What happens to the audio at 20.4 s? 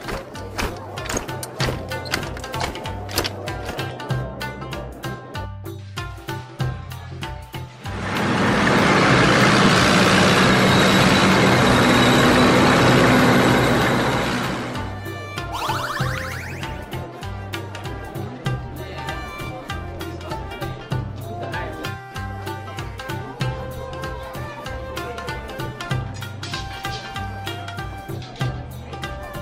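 At 20.4 s the receiver's jitter buffer is holding more audio than its target, so it is shortening its backlog by cutting out small pieces, each one or a few pitch periods long, over and over from 20.19 to 20.93 s. That jitter buffer speed-up plays the sound about 4% fast at unchanged pitch, removing roughly 40 ms in total, so this short stretch runs slightly faster than normal.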